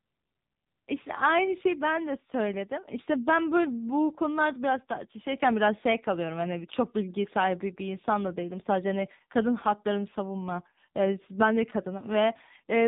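From start to finish the speech passes through the AMR narrowband mobile codec at a low bitrate, likely 6.7 kbps, leaving nothing above 4 kHz and heavy buzzy, synthetic-sounding damage.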